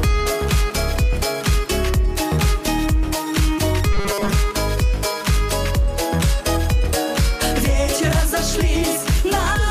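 Robotic sound from repeated short buffers runs from 3.93 to 4.33 s. Across that stretch the audio takes on a rigid, metallic buzz pitched at 200 Hz, which points to a chunk of about 5 ms being replayed over and over. The likely cause is new audio arriving too slowly, so the playback fills most of the gap by repeating that last short slice while the real material in between is dropped.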